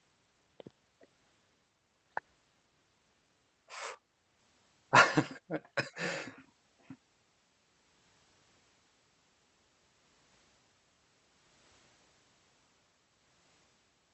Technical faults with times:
none

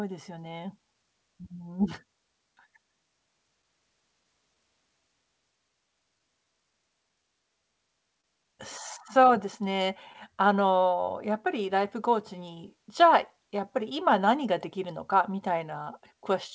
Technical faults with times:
0.00-16.55 clock drift between sender and receiver
0.60-7.23 repeated timing corrections
8.21-8.26 short stall from a late packet
9.20-16.15 repeated timing corrections

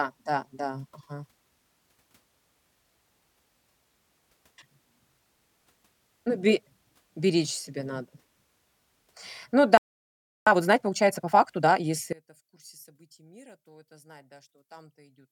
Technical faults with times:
9.77-10.47 playback stall
10.47-11.85 time-compressed catch-up
12.13-15.32 one channel inverted

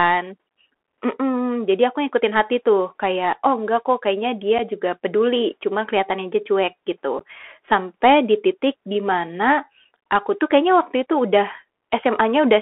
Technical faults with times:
0.00-12.61 Bluetooth CVSD headset codec
4.58 unconcealed Bluetooth headset packet loss
7.19 unconcealed Bluetooth headset packet loss

